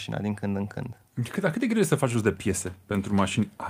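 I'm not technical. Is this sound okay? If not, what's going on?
No. There is clock drift between sender and receiver. The device that sent this audio keeps time about five percent faster than the device playing it, so sound arrives slightly quicker than it can be played out. The receiving side has to keep compensating throughout the clip.

That compensation shows up as repeated timing corrections from 0.23 s to 3.40 s. The receiver trims tiny pieces of sound to keep up, effectively running at 105 percent speed. The trims come at uneven intervals.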